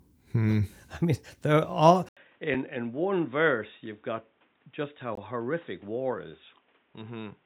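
An input switch to a poorer device comes at 2.09 s, right after "I mean they're all", and lasts to the end of the clip. There is a silence of about 80 ms, and then the speech returns dull and boxy with nothing above 3.8 kHz. It is roughly 10 dB quieter and carries a new noise floor around 40 dB below the speech. This is likely a change to another microphone or a headset's narrowband call profile.

Blocks of digital silence land at 2.54 s, lasting about 5 ms, and at 5.15 s, lasting about 20 ms. In each, a run of samples was replaced by zeros, as happens when the output buffer isn't filled in time. The sound cuts out and back with no fade. The abrupt edges make the first a sharp tick and the second a brief hole.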